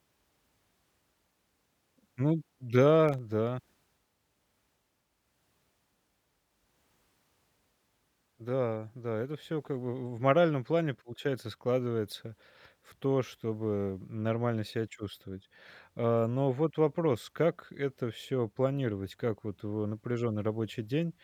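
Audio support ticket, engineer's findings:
Short burst of gritty crackle over the speech, 3.09 to 3.19 s, stopping abruptly. Processor overload crackle: audio thread missing a run of deadlines, around five very small buffers (under 1 ms each) dropped to silence, hard-edged gaps stacking into tearing.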